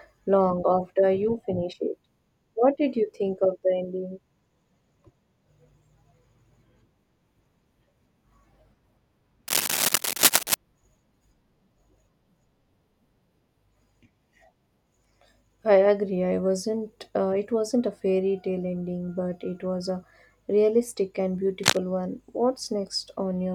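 From 9.48 to 10.54 s, and again briefly from 21.62 to 21.79 s, dense, uneven crackling bursts sit over the speech at roughly the same level as the speech. This is cable scratch noise, likely from a worn cable or connector shifting and rapidly changing its contact resistance.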